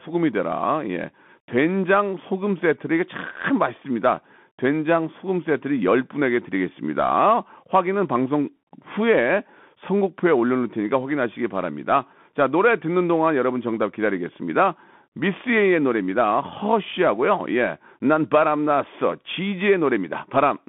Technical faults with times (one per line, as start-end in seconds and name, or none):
0.00-20.69 Bluetooth CVSD headset codec